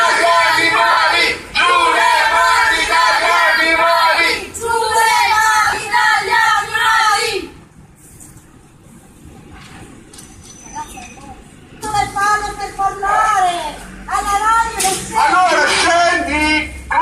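Lost LE Audio frames break up the audio at 0.91–0.97 s, 4.15–4.17 s and scattered across 5.65–5.83 s, longest gap around 40 ms. The LC3 decoder refills each gap with the last spectrum under random signs, smearing tones into noise and fading longer gaps.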